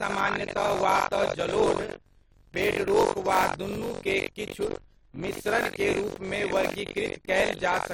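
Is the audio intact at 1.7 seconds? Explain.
No. At 1.7 seconds the speech carries a steady robotic buzz at about 47 Hz, present throughout the clip. This is buffer tearing: writer and reader of a ring buffer have slipped, so about a third of each period, which fits a 1024-sample buffer, replays audio from roughly a tenth of a second earlier, with hard joins.

The same moment also sounds swirly, smeared and hollow, with blurred attacks and nothing above 19.1 kHz, again across the whole clip. This is generation loss, likely from around ten rounds of AAC-LC encoding at 96 kbit/s, each quantising on a shifted frame grid.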